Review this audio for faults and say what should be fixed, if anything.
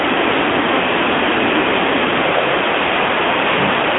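No faults found; nothing needs fixing.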